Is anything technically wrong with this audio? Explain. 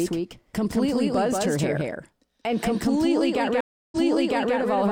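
Yes, there are two problems.

The whole clip has a doubled audio track. A second full-band copy of the speech trails about 200 ms behind, around 5 dB quieter, with no room colour or decay. It sounds like a flat slapback echo, likely from the signal being captured again by a slower path.

From 3.61 to 4.56 s there's a stream reconnect. The connection dropped, leaving 316 ms of silence, then a fresh decoder picked up mid-stream 640 ms earlier. You hear a gap, and then a chunk of speech repeats.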